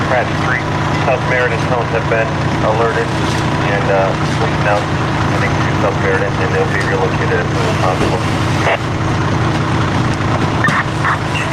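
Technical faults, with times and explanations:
No technical faults can be heard in this clip, so there are no times or explanations to give.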